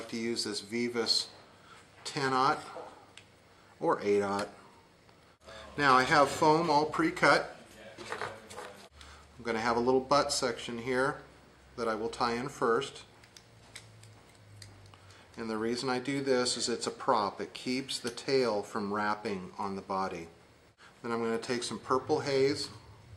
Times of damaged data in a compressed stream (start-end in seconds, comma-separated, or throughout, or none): none